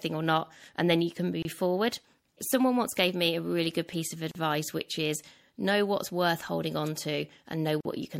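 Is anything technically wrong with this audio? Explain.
Yes. Throughout, the speech carries plainly audible compression damage, likely from MP3 compression at around 64 kbps. Short of bits, the encoder drops the treble and lets weak frequency lines flicker on and off. Sibilants turn metallic and the sound goes watery.

Three gaps at a join of encoded pieces interrupt it. At 1.42 s, after "and then you can", silence lasts 26 ms. At 4.31 s, between "really good piece of" and "which is know what's", it lasts 36 ms. At 7.81 s it lasts 45 ms. Each piece kept its encoder's leading delay and padded last frame. The speech stops, then resumes where it left off.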